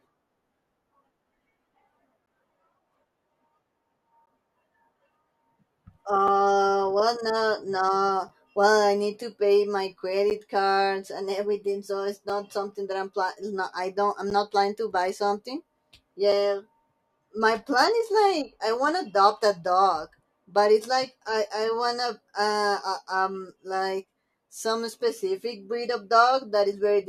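At 2.26, 4.26, 6.28, 8.29, 10.3 (before "cards and everything so"), 12.29 (between "and everything so it's" and "not something that"), 14.3 (before "not planning") and 16.32 s, gaps between stream segments cut 4 to 13 ms silences into the speech. Mismatched timestamps at joins of 2-second segments leave holes that play as silence. Each one is a brief hard-edged dropout. On the waveform it appears as a flat line, and on the spectrogram as a clean vertical blank.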